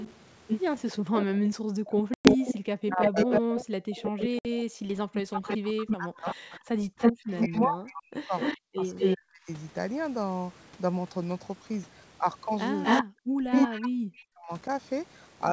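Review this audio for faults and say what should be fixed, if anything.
A delayed second copy of the speech runs under the main signal from the start to 9.16 s, trailing it by 327 ms and roughly as loud as the original. It returns from 12.83 to 13.89 s with a 253 ms delay and somewhat louder than the speech itself. This is an echo leak. The far end is most likely on a loudspeaker, and its echo canceller let the microphone's pickup of that loudspeaker travel back down the line. Prevention: retune or replace the far-end echo canceller, or have that side use a headset.

The room background drops out abruptly by about 40 dB from 0.93 to 0.97 s, from 3.73 to 5.07 s and from 6.78 to 7.15 s, then comes back. This is background gated by the echo canceller. While its loudspeaker played, the canceller pulled the microphone down hard, and it restored the level only when it judged the loudspeaker quiet. 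Prevention: use gentler suppression, or add comfort noise so the background stays steady.

The talker's level sinks, by up to about 40 dB at worst, during 1.25 to 3.45 s, 5.35 to 9.48 s and 13.17 to 14.68 s. It dips in pieces totalling under a second, about two seconds and about a second respectively. This is speech suppressed in double talk. The likely cause is both sides speaking at once, so the canceller could not tell its own talker from the echo and attenuated both. Prevention: improve the canceller's double-talk detection.

Hard-edged silences cut through the speech at 2.14 to 2.29 s, a 110 ms hole, and at 4.39 to 4.46 s, a 60 ms hole. In each case the sound resumes slightly distorted before settling. This is packet loss on an ADPCM call, the G.722 link that is otherwise clean at 64 kbit/s. The lost audio was replaced by silence, and the decoder's predictor and step size drifted from the sender's until they resynchronised. 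Prevention: add packet-loss concealment with decoder state recovery, or improve network reliability.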